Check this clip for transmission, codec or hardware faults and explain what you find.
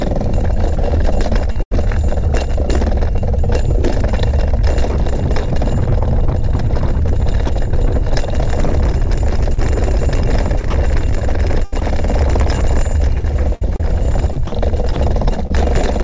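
There are a few faults here, all the kind you get over a call link. The band stops at 8 kHz, which fits G.722 at 64 kbps.

Sound chopped by the voice detector shows up at 1.52 to 1.72 s, 10.61 to 11.82 s and 13.20 to 14.52 s. Within each stretch, bits of sound, about 122, 159 and 188 ms in total, give way to synthetic background, so it turns choppy. That's likely the sender's detector toggling on and off.

Sound dropped by the voice detector hits twice, at 7.47 to 7.49 s and at 14.93 to 14.96 s. Roughly 20 and 30 ms of quiet sound go missing and steady comfort noise sits in their place. It's probably the detector mistaking quiet detail for background and briefly stopping transmission.

Short concealed packet loss happens at 9.54 to 9.58 s and 15.47 to 15.51 s, with about 30 and 20 ms of audio missing. The receiver stretched the preceding sound to cover the gaps, about 32 and 27 ms, and blended back in. 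You hear a quick smear or wobble there.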